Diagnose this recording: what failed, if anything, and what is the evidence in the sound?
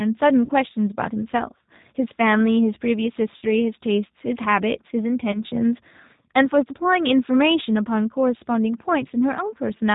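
The whole speech clip sounds band-limited and slightly rough, with a synthetic edge and nothing audible above 4 kHz. That points to the codec stage: G.729 compression at 8 kbit/s, whose damage is plainly audible here. Each 10 ms frame is rebuilt from a vocal-tract filter, a pitch predictor and a few pulses rather than the actual waveform, which produces the rough, synthetic character.

At 0.45–0.51 s, 3.37–3.44 s and 5.32–5.40 s the speech is stretched and fades, then takes a moment to recover its normal strength. That is VoIP packet loss concealed by the speech codec, a network-stage failure. The gaps fit roughly 40, 50 and 20 ms of missing audio. The decoder repeated its last pitch and filter with falling gain, and because each frame depends on the previous one, the speech stays weak briefly after packets resume.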